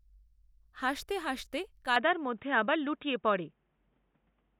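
From 1.96 s to the end, the speech turns dull and boxy, with nothing above 3.8 kHz, a level shift of about 5 dB, faint new background noise, and no gap at the change. The likely cause is the input being switched to a poorer device.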